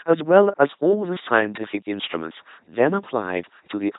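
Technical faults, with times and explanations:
Throughout, LPC-10 vocoder: buzzy, mechanical speech with nothing above 3.8 kHz, rebuilt from a pulse train or noise through an all-pole filter, fitting 2.4 kbit/s.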